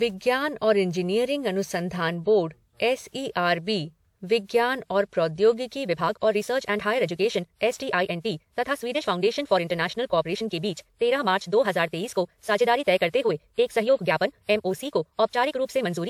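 A speech clip with two faults. Throughout, the sound is swirly, hollow and smeared, and consonant attacks blur. Content reaches up to about 20.1 kHz. This is generation loss, likely from encoding with a lossy codec, something like WMA at 128 kbit/s, roughly seven times over. Each pass adds fresh quantisation noise and spectral holes. From 5.80 s to the end at 16.10 s, the pace jumps abruptly to about 1.71 times normal while pitch holds steady. It sounds rushed. This is a time-stretched section, likely compressed by dropping short pieces.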